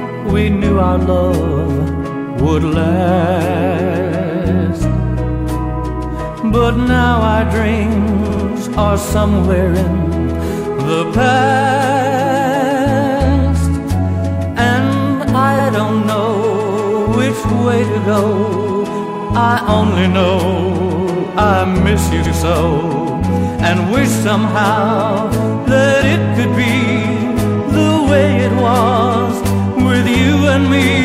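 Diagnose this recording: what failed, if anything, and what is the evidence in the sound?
The fault is repeated frames at the codec or storage stage, with four stutters. At 8.29 s and 19.14 s a 69.7 ms block plays two extra times. At 15.58 s and 22.25 s a 92.9 ms block plays once more. The block lengths fit runs of 23 ms compressed frames. On a waveform the same shape repeats back to back. A spectrogram shows identical vertical slices.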